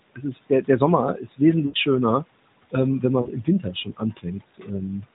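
Throughout the 5 s of speech, the background sinks between phrases and swells back under the talking. These are noise suppressor artifacts: frame by frame the suppressor pulls down bands it judges to be steady noise, here by about 20 dB, while the room noise sits about 17 dB below the speech and is part of the recording.

From 0.15 to 0.24 s the opening sound comes out faint and swallowed, and again from 1.16 to 1.4 s, just before "schöner ähm wenn". This is speech cut by the noise suppressor, which mistook these soft parts for background and turned them down by about 15 to 16 dB.

From 1.66 to 1.76 s, just before "schöner ähm wenn", the sound smears out and fades before returning briefly rough. These are lost AMR speech frames: the decoder repeated its last good settings with falling gain across 80 ms, which fits four lost 20 ms frames. A shorter dip follows from 3.22 to 3.30 s, just after "schöner ähm wenn", lasting 40 ms.

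The suppressor cuts into the speech again from 3.44 to 4.26 s, dulling parts of that stretch by about 15 dB, and from 4.52 to 4.69 s, where about 16 dB is lost. Throughout, the audio stays within the narrowband AMR limit, with nothing above 4 kHz.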